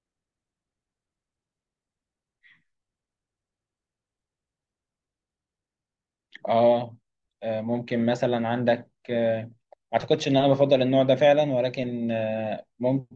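Speech recording, with no technical faults audible anywhere.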